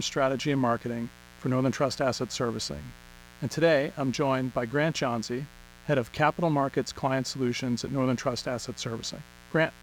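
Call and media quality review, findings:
Steady, raspy mains buzz under the speech, whole clip, roughly 25 dB below the voice. Spiky 60 Hz interference, probably from a dimmer, rectifier or unshielded cable, pulsing twice per cycle and spraying harmonics up into the kilohertz range.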